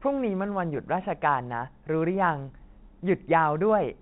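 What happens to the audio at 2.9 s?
Nothing goes wrong at 2.9 s: the speech passes through intact there, carried cleanly by the G.711 telephone coding that runs throughout.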